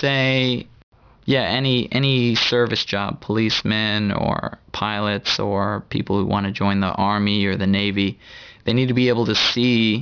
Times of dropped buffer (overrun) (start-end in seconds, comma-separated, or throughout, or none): none